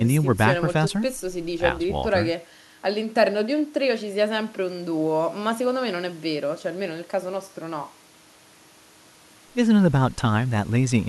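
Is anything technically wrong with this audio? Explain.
No, nothing technically wrong can be heard in this speech recording. No part of the clip shows a fault that needs explaining.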